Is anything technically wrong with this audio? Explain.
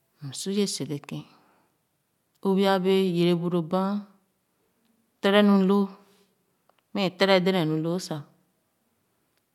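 Yes. Channel delay (comb filtering) runs from 0.77 s to the end. One channel arrives roughly a single sample late, and summing to mono cancels content near the top of the band, around 20 kHz. The speech sounds slightly dull, with softened high-frequency air.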